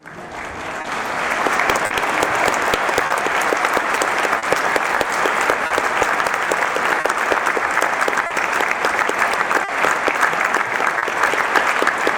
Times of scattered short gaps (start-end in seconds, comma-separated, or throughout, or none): 0.81-11.04